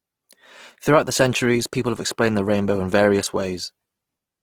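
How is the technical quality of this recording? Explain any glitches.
The recording is marked by audible compression damage that runs through the whole clip. It shows Opus compression, likely from an encoder running in its music (CELT) mode at a low rate, which fits around 16 kbps. Short of bits, the encoder keeps each band's energy but refills band detail with folded or noise content, so the speech sounds grainy and rough rather than swirly, while the bandwidth still reaches about 20.4 kHz.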